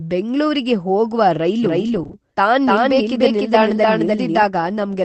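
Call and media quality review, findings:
Doubled audio track, 1.63–4.43 s, starting right after "ಬೆಂಗ್ಳೂರಿಗೆ ಹೋಗ್ವ": a second full-band copy runs roughly a third of a second behind at about equal level. It is dry and has abrupt onset and offset. The likely cause is a duplicate capture path or a misaligned edit.

Lost packet rebuilt from error correction, 1.87–2.01 s: 80 ms of audio is rougher and noisier but has no gap, which fits four lost packets. The Opus decoder played the low-bitrate in-band FEC copies carried by the following packets.

Short concealed packet loss, 2.03–2.07 s, 2.07–2.11 s and 2.11–2.15 s: three back-to-back 20 ms holes with a brief smear or wobble. The receiver extrapolated the preceding audio to fill them, then crossfaded back into the received stream. This is audible on top of the normal Opus coding noise of the call path.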